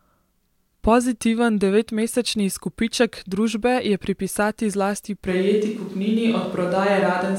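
At 5.29 s, just after "družbe je pripisati zlasti", the sound changes abruptly and stays changed to the end. It turns roomy and hollow, and the bass thins out. The level holds roughly steady. A layer of room noise appears, about 35 dB below the speech. This is a switch to a distant microphone. The close microphone's signal was likely lost, leaving a microphone further from the talker, which picks up more of the room.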